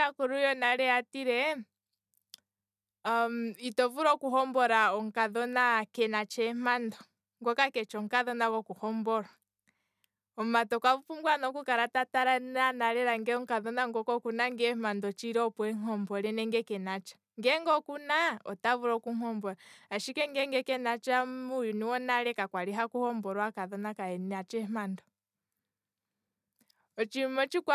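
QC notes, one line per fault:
No technical faults can be heard anywhere in the signal.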